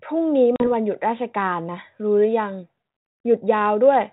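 At 0.56 s there's a hard-edged gap of about 40 ms, which points to a couple of lost packets on an ADPCM call. The missing audio gets filled with silence, and because the decoder's adaptive predictor and step size keep running on without the real data, they drift away from the sender's. When the speech comes back, it returns slightly distorted, then pulls itself together by about 0.68 s. Underneath, the light grain of 32 kbit/s G.726 is still audible.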